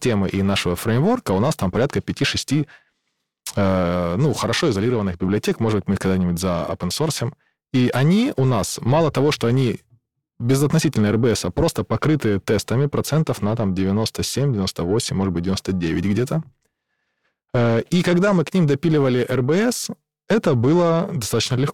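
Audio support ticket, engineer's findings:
Periodic clock jitter across the whole speech clip. Symptom: rough, metallic edge on speech, strongest on sibilants and upper harmonics, gone in pauses. Probable component: converter clock, disturbed by interference at around 1 kHz. Mechanism: clock wobble puts sidebands roughly 1 kHz either side of every component. Distinguishing point: random jitter gives a noise-like haze, and hum stays audible in silence. This grit tracks the signal only.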